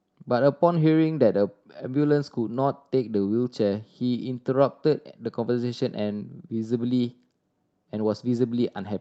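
Nothing is technically wrong with this speech clip.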